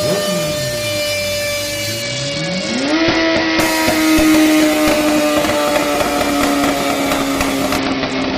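From 2.02 to 3.60 s and again from 7.78 s to the end, a Bluetooth SBC bit pool drop starves the upper sub-bands, fitting a fall from bit pool 31 to 8 (around 66 kbps). The treble dulls and grit rises, and the spectrogram shows the top band abruptly emptied.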